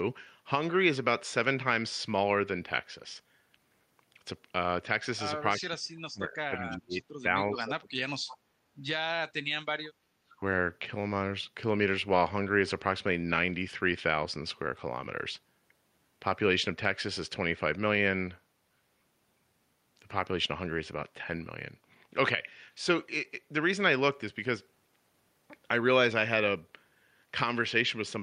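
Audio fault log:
5.59–7.03 s, 7.22–7.35 s, 7.51–8.02 s, 10.15–10.42 s: speech suppressed in double talk. The echo canceller likely mistook overlapping talk for echo and turned this side down, so the speech dips or drops out in pieces, up to about 40 dB deep, shallowest near 7.3 s.
6.71–6.77 s, 8.28–8.37 s: echo leak. A loudspeaker end's canceller likely let residual pickup through, so brief scraps of the speech return 338 ms late, about 30 dB and then about 20 dB below the direct speech, heard as faint, delayed fragments.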